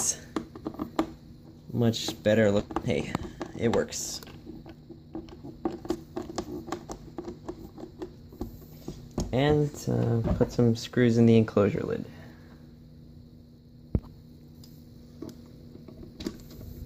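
At 2.59 s, about a second of audio was discarded while later material was already queued, so playback lurches forward in a skip ahead. The two sides of the jump are butted together with no fill, leaving an abrupt splice where sound simply goes missing.

From 2.69 to 5.97 s a jitter buffer speed-up follows: the buffer, still holding more than its target, trims short pitch-period slices again and again, shedding about 0.4 s in total. The audio runs at 110% speed with unchanged pitch, sounding rushed.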